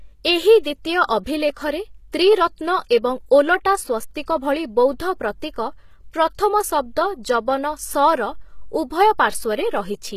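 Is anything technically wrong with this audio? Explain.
Yes. Two faults can be heard in this speech.

HE-AAC compression runs through the whole clip. The treble sounds synthetic, s sounds come out gritty and lispy, and nothing reaches above about 14.9 kHz. This is likely HE-AAC at a low bitrate, around 20 kbps. Only the lower band is really coded, and the top is rebuilt by copying lower content upward under a coarse envelope, so the upper harmonics no longer line up with the real ones.

Pre-echo occurs from 0.63 to 0.65 s, spreading over about 22 ms, and again at 2.89 s over about 15 ms. In each case a sharp onset lands late in a transform block. The quantisation noise, sized for the loud attack, is spread evenly across the block and fills the silence just before it, so a short hiss comes ahead of the attack and softens it.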